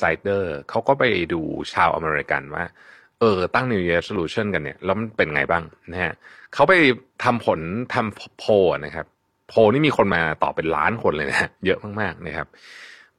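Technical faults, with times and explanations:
4.16–4.19 s and 10.12–10.16 s, overlap between stream segments: about 32 ms and 35 ms of speech vanish where two segment timestamps overlapped and the player trimmed the supposed duplicate, which was never actually doubled. The waveform jumps abruptly across each cut, heard as a tiny click or skip. The roughly 6-second spacing fits 6-second segment boundaries. A spectrogram shows a thin broadband vertical line at each point, and the waveform shows a sharp discontinuity.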